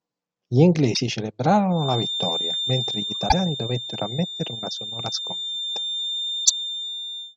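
Damaged data in the compressed stream at 0.90 to 0.97 s: corrupted bytes make the decoder lose frame sync and hunt for the next header, producing a brief glitch. From 1.68 s to the end, a feedback whistle sits at 3.6 kHz, a little below the speech level and swelling and fading slowly, likely from a loudspeaker-to-microphone loop held just short of runaway. The same stream damage returns at 3.25 to 3.34 s and 6.42 to 6.51 s, each a short glitch where the decoder resynchronises.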